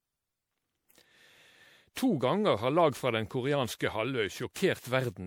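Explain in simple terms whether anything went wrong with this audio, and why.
Something did go wrong here, and it lasts the whole speech clip. It has a swirly, smeared, hollow quality, and the starts of sounds come out soft and blurred instead of crisp. That's generation loss, most likely from the audio being saved as an MP3 around seven times over. Each re-save throws away a bit more detail in slightly different places, so the damage piles up.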